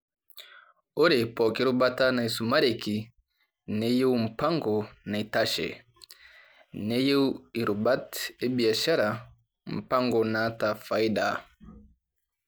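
No technical faults can be heard anywhere in the recording.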